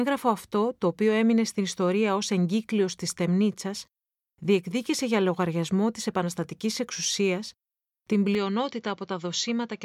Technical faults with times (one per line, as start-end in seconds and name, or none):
8.35-9.85 input switched to a poorer device